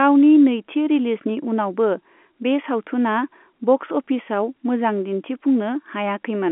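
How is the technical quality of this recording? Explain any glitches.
Nothing stood out on listening to this speech, which carries the narrow band of ordinary G.711 telephone coding with nothing heard above about 3.8 kHz.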